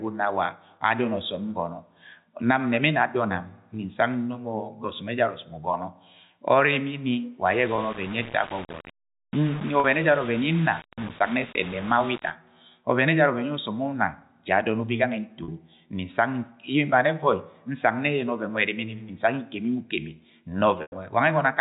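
Telephone-band speech, carried over G.711 A-law with no audible content above 4 kHz, shows two technical faults. From 7.46 to 12.30 s the signal was likely reduced to about 5 bits by plain rounding with no dither, so the error tracks the sound itself. The result is a grainy distortion that changes with the sound, sitting only around 15 dB below it, and the quietest stretches break up or drop out. The stream also lost packets, and the receiver bridged each gap by repeating the last pitch period. The gaps fall at 7.76–7.78 s (20 ms), 9.80–9.84 s (40 ms), 15.44–15.48 s (40 ms) and 20.82–20.92 s (100 ms). The shorter gaps, consistent with one or two lost 20 ms packets, come through as a brief held, buzzy tone. The 100 ms gap, which points to about five packets, fades toward silence before the speech cross-fades back in.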